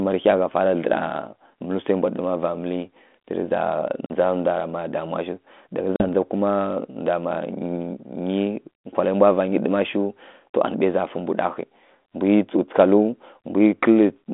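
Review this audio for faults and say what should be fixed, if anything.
Packet loss on the ADPCM call, at 4.06 to 4.11 s and 5.96 to 6.06 s, just before "ndza kuma". Each time about 40 ms, likely a couple of packets, drops to hard silence. The decoder's adaptive predictor and step size then lose sync with the sender, so the speech comes back slightly distorted before settling. The line itself sounds like light, telephone-band G.726 coding, consistent with 32 kbit/s. To fix it, add packet loss concealment and a decoder state reset or resync after gaps, plus jitter buffering or redundancy on the link.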